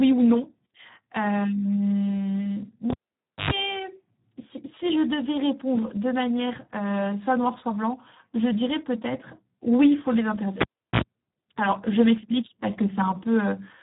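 Heavy Speex codec damage runs throughout. Starved of excitation bits, the speech sounds hoarse and noisy, as at about 8 kbps. Nothing remains above 3.8 kHz.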